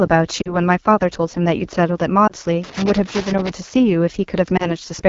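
A speech clip carried over the AMR wideband (HD Voice) codec throughout. The coding damage is plainly audible. The voice sounds rough and raspy. That fits one of the lowest AMR-WB modes, around 8.85 kbit/s. At that rate the pulse-driven vocal tract model runs short of bits. The top band, 6.4 to 7 kHz, is only shaped noise. Lost AMR speech frames cause three brief dropouts. From 0.42 to 0.56 s about 40 ms of speech is missing. Sound drops to near silence, then returns thin. From 2.27 to 2.32 s, and again from 4.57 to 4.70 s, about 20 ms is missing each time. These are short warbling dips. Each fits radio errors corrupting frames. The decoder then repeated the last good pitch and vocal tract settings at falling gain. The voice recovers roughly after each gap. From 2.64 to 3.50 s there is loose connector crackle. It is an irregular burst of scratching. A worn or dirty contact is making and breaking as it moves. 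That chops the signal, and any DC on the line adds clicks.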